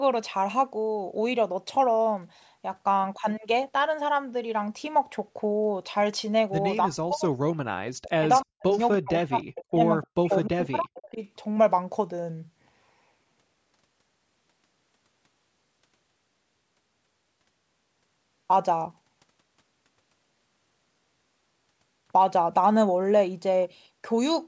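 From 6.85 to 8.66 s the speech drops away in pieces, sinking by up to about 40 dB. This is speech suppressed in double talk, likely from an echo canceller muting the talker while both sides spoke. At 8.71 to 8.79 s a faint copy of the speech surfaces about 297 ms late and about 30 dB down. This is an echo leak, likely loudspeaker pickup that the canceller missed. The cutouts return at 8.96 to 9.34 s, 9.51 to 9.83 s and 10.03 to 10.33 s, each again reaching about 40 dB. Between them, at 9.39 to 9.43 s, another brief echo leak comes through at a 298 ms delay and about 20 dB below the speech. The last echo leak spans 10.32 to 10.45 s at a 299 ms delay and about 20 dB down. A final suppression follows from 10.49 to 11.18 s.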